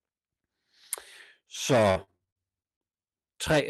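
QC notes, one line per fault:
1.91–2.96 s: repeated packet loss (robotic sound). A rapid run of short gaps, longest 44 ms, gets filled by extending the last sound. About a quarter sounds choppy and robotic.
2.96–3.26 s: jitter buffer slow-down. The receiver repeats pitch periods to rebuild its reserve, adding 68 ms. Audio plays at 81% speed, drawn out, pitch unchanged.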